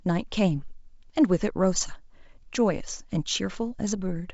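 No technical faults occur at any point in the speech, which comes through G.722 wideband telephone coding at 64 kbit/s with nothing above 7.7 kHz.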